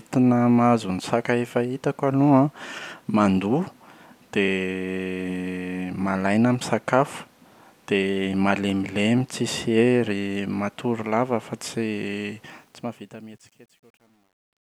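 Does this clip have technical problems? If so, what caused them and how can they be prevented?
Yes. Truncation distortion on a fade runs from 12.47 s to the end at 14.79 s and is worst from 13.03 s. The fade-out's tail turns gritty, which fits a stage keeping only 10 bits with no dither. To prevent it, process fades at full resolution and add dither whenever bit depth is reduced.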